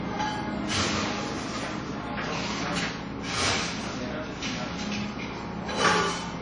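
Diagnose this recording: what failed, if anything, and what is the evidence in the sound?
The codec stage failed. Across the whole clip, the everyday sounds have a ringing, washy quality, and the damage is plainly audible. A hiss rises and falls with the signal. Nothing is present above about 10.1 kHz. The likely cause is WMA compression at a low bitrate, which fits something near 32 kbps. The transform codec spreads quantisation noise over tens of milliseconds, smearing transients. At this rate it also zeroes weak spectral lines and discards the top band.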